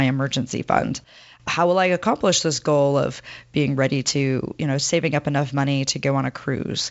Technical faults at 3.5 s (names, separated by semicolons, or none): none